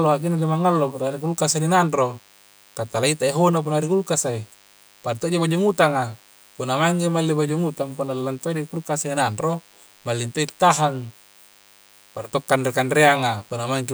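Throughout the speech runs DECT cordless phone buzz: rectified 100 Hz radio bursts give a thin, steady buzz well below the voice, showing as evenly spaced horizontal harmonic lines.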